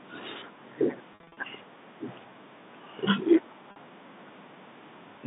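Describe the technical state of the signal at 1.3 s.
Packet loss with pitch repetition runs from 1.13 to 1.37 s: short gaps up to 50 ms are filled by repeating the last pitch period, giving a held, buzzy sound.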